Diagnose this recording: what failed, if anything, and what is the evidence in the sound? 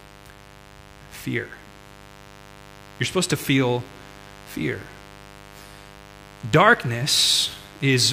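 The analogue wiring failed, letting in mains buzz. A steady, raspy buzz runs under the speech for the whole clip, roughly 25 dB below it. Its harmonics of 50 Hz reach into the kilohertz range. Sharp switching spikes, twice per mains cycle, are entering through poor shielding or a nearby dimmer.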